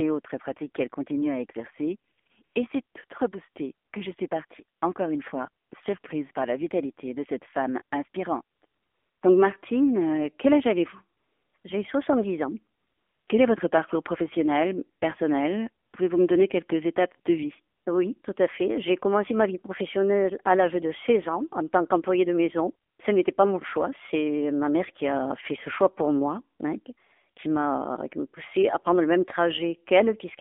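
Throughout the 30-second speech clip the sound is thin, boxy and plainly buzzy, with a synthetic edge to every voiced stretch. This is the AMR narrowband mobile codec at 7.4 kbps. The band runs only from about 250 Hz to 3.5 kHz, which fits 8 kHz sampling. At this low bitrate the vocal-tract model and its sparse pulse excitation cannot follow the voice closely, so the damage is easy to hear.

From 2.12 s to 22.98 s the background repeatedly drops out and is replaced by a smooth, even hiss that switches in and out. There are 17 of these AMR comfort noise patches, lasting 20 to 560 ms. Several cluster between 2.12 and 2.56 s, one of them right after "qu'elle continue à exercer" and before "et c'est toute reboostée". The longest run from 8.66 to 9.22 s, 11.18 to 11.54 s and 12.78 to 13.28 s. The last follows "tant qu'employée de maison" at 22.90 s. In each gap the phone judged the talker silent and stopped sending speech frames, and the receiver filled the pause with noise built from a rough level and spectrum.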